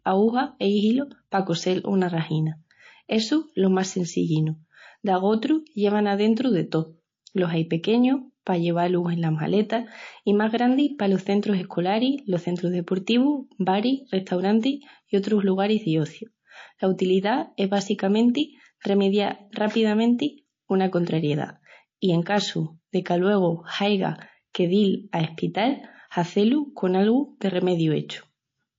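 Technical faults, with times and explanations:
Throughout, MP3 compression: speech sounds watery and swirly with muffled treble and smeared s sounds, likely from a starved encoder cutting highs and toggling weak frequencies, fitting 32 kbps.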